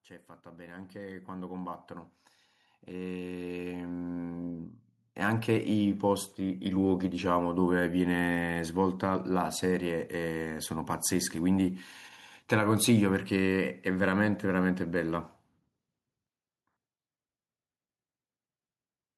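A speech recording with automatic gain rising twice. From 0.42 to 1.89 s the level climbs by about 7 dB. From 2.71 to 5.53 s it climbs by about 12 dB. The gain control judged the input too quiet and raised it gradually. Voice and background swell together each time.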